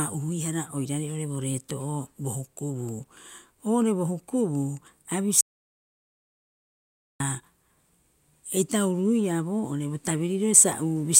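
The input feed was likely lost for a moment, with the recorder writing silence throughout. This audio dropout to silence runs from 5.41 to 7.20 s: the speech cuts off abruptly, about 1.8 s of dead silence with no room tone follows, then speech resumes mid-flow.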